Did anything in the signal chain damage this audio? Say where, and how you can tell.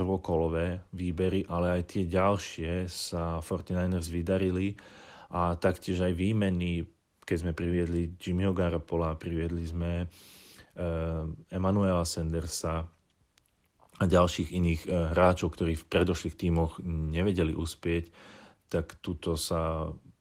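No, nothing along the chain has left an audible mark on this speech, so there's no stage to point to.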